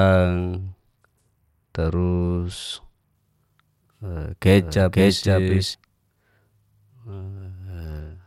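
Speech with two kinds of fault. From 0.59 to 3.14 s, and again from 7.84 s to the end, a Bluetooth SBC bit pool drop dulls the treble and adds gritty noise. A spectrogram shows the top band emptied and the rest blotchy, which fits the bit pool falling from 31 to 12, around 88 kbps, on a congested link. From 4.53 to 5.75 s a doubled audio track appears: an equally loud, dry copy trails about half a second behind, starting and stopping abruptly, likely from a second, slower capture path or a misaligned edit. On the waveform each envelope repeats, shifted by the same gap.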